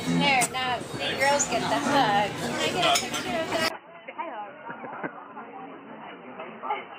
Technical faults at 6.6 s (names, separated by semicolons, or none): input switched to a poorer device